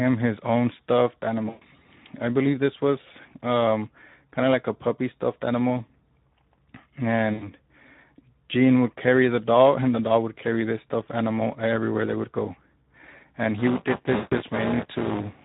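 Speech coded throughout with the Speex codec, with plainly audible codec damage: the voice sounds hoarse and grainy because too few bits go to the excitation signal, a level of degradation that fits a rate of around 11 kbps. VoIP packet loss concealed by the speech codec occurs at 1.49 to 1.65 s, between "his own stuffed" and "I believe this was", then at 7.33 to 7.49 s and 14.15 to 14.35 s. During about 120, 80 and 160 ms of missing audio, the decoder extends the last pitch and filter into a fading buzzy tone or coloured noise, and the voice remains weakened briefly afterward.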